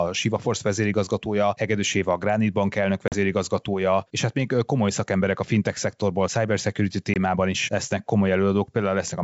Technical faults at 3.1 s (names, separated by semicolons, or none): packet loss on an ADPCM call